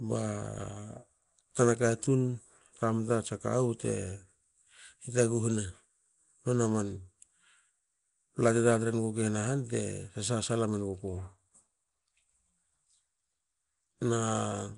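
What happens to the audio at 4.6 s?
At 4.6 s the speech carries Nellymoser compression, present throughout the clip rather than starting there. The damage is plainly audible: a rough, hissy halo and a smeared, underwater quality, with nothing above 10.7 kHz. The likely cause is Nellymoser Asao coding in 256-sample blocks at a fixed two bits per sample, filling starved bands with noise, which fits a rate near 44 kbps.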